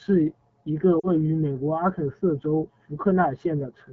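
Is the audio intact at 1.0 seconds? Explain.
No. From 0.99 to 1.07 s, lost AMR speech frames cause a 40 ms gap, consistent with two missing 20 ms frames. The decoder repeats the last pitch and vocal tract settings at falling gain, so the sound smears briefly, fades quickly, and returns weak or rough. On a spectrogram, harmonics stretch flat and dim, and the waveform envelope dips.

The AMR wideband (HD Voice) codec also affects this moment. The plainly rough, raspy texture fits its 8.85 kbit/s mode. A spectrogram would show blurred detail below 6.4 kHz and a noise-filled band up to 7 kHz.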